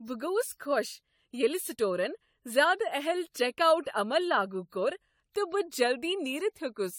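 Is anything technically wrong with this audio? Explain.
Yes. Generation loss runs through the whole speech clip. The speech sounds swirly and hollow, with smeared consonant attacks, more degraded than a single encode at what sounds like around 96 kbit/s AAC-LC would leave. The likely cause is about seven rounds of decoding and re-encoding, each quantising on a shifted frame grid so the noise and dropouts accumulate. A spectrogram shows patchy, flickering holes across the upper bands below 20 kHz and smeared onsets, and the waveform's transients look softened.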